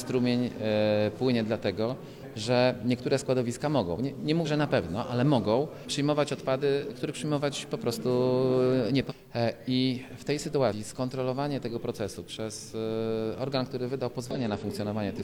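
Short glitches break into the sound at 2.19–2.24, 4.42–4.47, 9.06–9.12, 10.68–10.73 and 14.31–14.37 s, each around 50–60 ms. This is damaged data in a compressed stream: corrupted frames are misdecoded while the decoder loses and regains sync.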